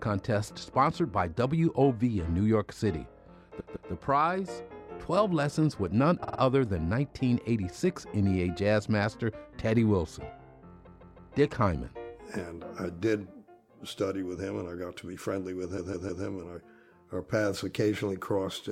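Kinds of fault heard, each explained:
Repeated frames: the sound stutters at 3.59, 6.23, 10.86 and 15.77 s, replaying a 157 ms block (52 ms at 6.23 s) two or three extra times. A run of compressed frames was duplicated, so the decoder played it again, lengthening the audio.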